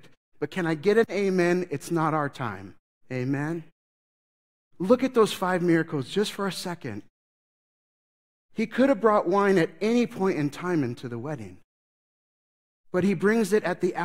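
No technical faults can be heard in this speech recording: the signal stays steady and intact throughout, and the background falls silent in the pauses and comes back in time for each next sound, with only very quiet sound lost.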